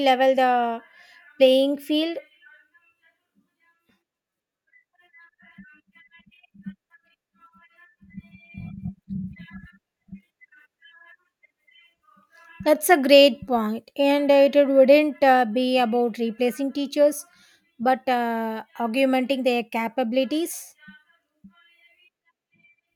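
Speech recording with no technical faults to point out.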